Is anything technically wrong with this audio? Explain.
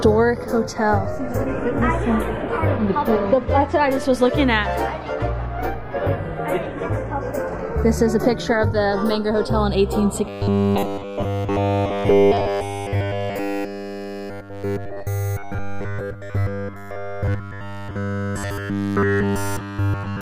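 Yes, there are two faults.

Channels drifting apart runs through the whole clip. The two channels' clocks disagree by roughly 50 parts per million, so the inter-channel delay creeps to under a millisecond. Summed to mono, comb notches sweep slowly downward across a spectrogram, heard as slow flanging.

From 10.29 s to the end, the sound becomes a rigid, metallic 100 Hz buzz. The likely cause is robotic sound from repeated short buffers: a roughly 10 ms chunk is replayed over and over while fresh audio is skipped. The waveform shows identical repeating cycles, and the spectrogram shows evenly spaced harmonics every 100 Hz.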